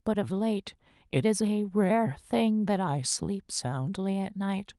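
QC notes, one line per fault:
No technical faults are audible in the speech signal at any point in the clip.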